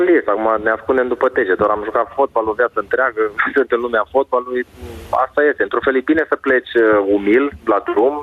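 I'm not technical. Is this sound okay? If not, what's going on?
No. The whole clip has gain pumping: the level drops sharply under each loud sound, a large swing. It's likely from the recording level being set too high, with an automatic limiter constantly pulling it back. Unlike a noise gate, the background never cuts to silence.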